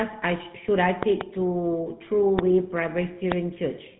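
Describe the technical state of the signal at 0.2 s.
At 0.2 s the speech is already carrying GSM full-rate codec damage, which runs through the whole clip. The vocal tract is modelled and driven by sparse, regularly spaced pulses, giving a plainly buzzy, gravelly roughness that fits the 13 kbps coder. Nothing passes above about 3.9 kHz.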